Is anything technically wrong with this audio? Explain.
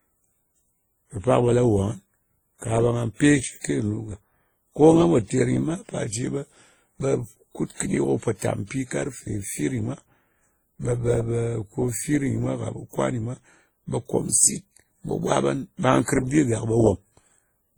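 Yes. Throughout the speech there is transcoding between lossy codecs, likely WMA at 32 kbit/s re-encoded as Opus at 32 kbit/s. Opus spends bits on the WMA artefacts, so both codecs' artefacts are heard together, with nothing above 20.1 kHz.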